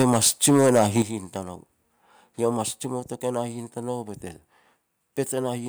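Microphone overload runs from the start to 1.02 s. The speech is driven roughly 7 dB past what the converter can represent, so the loudest peaks are flattened at the converter's limit, with around 4 percent of samples clipped. The cause is likely an input gain set too high. Each clipped crest adds a harsh, crackling edge to the strongest syllables, and the squared-off tops give the opening second a gritty, brittle texture.

A microphone volume step-down arrives at 0.02 s, cutting the input by about 3 dB in one jump, and a second, larger step of about 8 dB follows at 1.02 s, just as the overload ends. Both are likely the call software reacting to the clipping by lowering the device's input volume. The speech and the background fall together at each step, and the second drop makes the rest of the clip sound abruptly quieter.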